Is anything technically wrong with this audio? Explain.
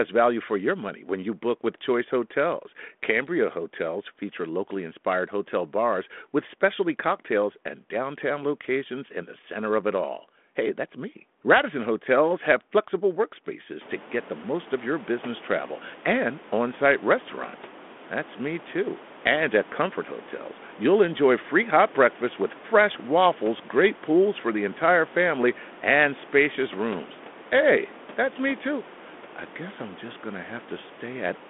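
No, nothing in this speech recording points to a technical fault. The room's background noise rises by about 23 dB at roughly 14 s yet stays about 22 dB below the speech, and the telephone band runs from 250 Hz to 3.5 kHz, as expected for G.726 at 32 kbit/s.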